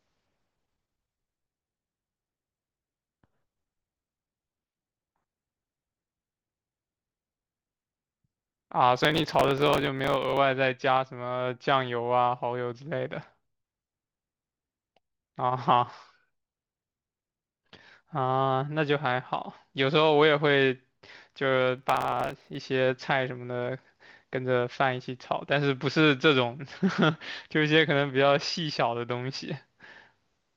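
A speech recording with two bursts of processor overload crackle, from 8.96 to 10.38 s and from 21.78 to 22.56 s. Dozens of very short buffers, each under a millisecond, miss their deadlines in a row and are skipped, leaving hard-edged gaps heard as gritty tearing over the speech.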